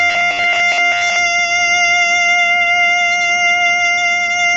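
From 0.01 to 1.16 s the music collapses into robotic sound from repeated short buffers, a rigid metallic buzz at 100 Hz. The likely cause is a 10 ms chunk being replayed while most of the real audio is skipped. On a waveform it shows as roughly repeating 10 ms cycles; on a spectrogram, evenly spaced lines at 100 Hz multiples.

Throughout the clip the music sounds grainy and rough, with plainly audible noise between harmonics and nothing above 7.6 kHz. This most likely comes from low-delay AAC compression, AAC-ELD at a low bitrate of around 24 kbps. A spectrogram shows a hard ceiling at 7.6 kHz and smeared, noisy harmonic bands.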